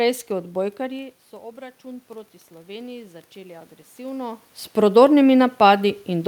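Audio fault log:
0.78–5.08 s, automatic gain rising: the input fell by about 17 dB, so the gain control raised its level by about 6 dB over some four seconds. The speech and the room noise behind it swell up together, not the voice alone.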